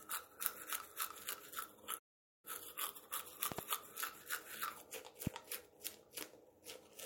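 A playback stall interrupts this recording of sounds from 1.98 to 2.45 s: the output falls silent for about 450 ms, likely because the player ran short of data or its thread was blocked, before resuming. A loud pop appears as a quick double pop at 3.52 to 3.61 s and a single pop at 5.27 to 5.29 s, each roughly 20 dB above the surrounding sound, which continues beneath them. These are likely voltage spikes from a switch, static or a driver glitch.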